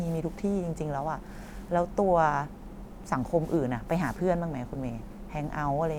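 No technical faults can be heard anywhere in the speech. There is nothing to place at any point in time.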